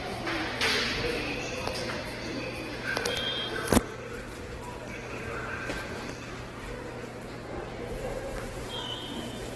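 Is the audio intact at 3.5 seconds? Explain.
No. At 3.5 seconds the sound carries the same damage as the rest of the clip, most likely Opus compression at a very low rate, consistent with about 12 kbps in its music (CELT) mode. With too few bits, the encoder keeps each band's overall energy but refills the fine detail with copied lower bands or noise. Tonal parts turn grainy and rough rather than swirling. On a spectrogram, everything stops sharply at about 12.1 kHz, and the bands beneath look smeared and noise-textured.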